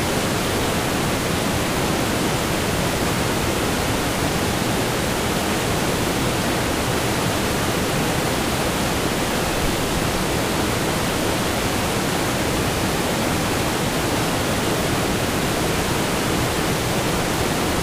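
No technical faults can be heard anywhere in this recording of sounds. Nothing in the audio calls for a timestamp or comment.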